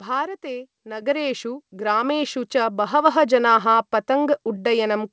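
At 1.02 s the microphone volume stepped up by about 7 dB in one jump, lifting speech and background together; the waveform envelope widens abruptly, spectrogram brightens uniformly.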